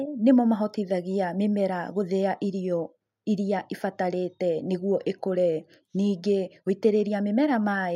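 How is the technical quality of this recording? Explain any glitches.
The technical quality of this recording is sound, and there are no glitches to explain.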